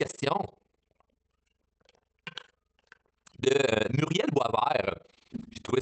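Speech throughout carries overlap-add ripple: the level pumps about 60 dB around twenty times a second, a rough tremolo from frame overlaps not summing to constant gain, heard over call-codec audio band-limited near 8 kHz, consistent with Opus at about 24 kbps.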